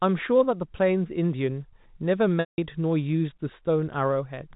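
Speech on a telephone line with one clear dropout from 2.40 to 2.58 s. It is packet loss with pitch repetition. About 180 ms of audio went missing, which fits a run of several lost packets. The receiver filled the gap by repeating the last pitch period. That repeat faded out over about 50 ms, so the rest of the gap is silent. The speech then returns through a short cross-fade. The G.711 telephone coding keeps everything below 4 kHz.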